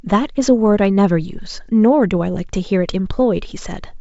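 Nothing stood out on listening to this speech, which comes through the G.722 wideband telephone path at 64 kbit/s with at most a faint trace of that coding.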